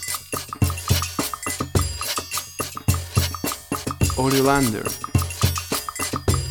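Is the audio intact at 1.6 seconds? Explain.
Yes, the audio is intact at 1.6 seconds, with no dropout, click, distortion or other fault at that moment.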